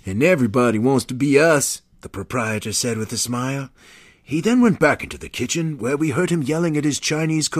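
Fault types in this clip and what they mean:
Dropped samples: Four sharp, isolated clicks cut through the speech, at 2.58, 4.48, 6.01 and 6.93 s. The 4.48 s click falls just before "went back into", and the 6.01 s click sits between "kitchen where" and "heard him". Each is a single thin tick with no gap around it. The likely cause is a tiny run of missing samples, a small fraction of a millisecond. The waveform jumps straight to a later value, and that step makes the click.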